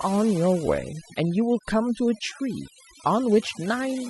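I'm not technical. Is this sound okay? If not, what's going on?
No. The speech has overdone noise removal throughout. A cleanup tool set too strong strips quiet parts of the voice and leaves the background as twinkling near-silence.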